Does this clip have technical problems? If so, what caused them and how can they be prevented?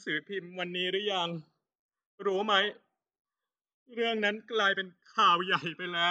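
Yes: channels drifting apart throughout the speech. Separately clocked devices, off by around 200 ppm, let the offset grow to about a millisecond, sweeping comb notches into slow flanging. Locking both devices to one shared word clock prevents this.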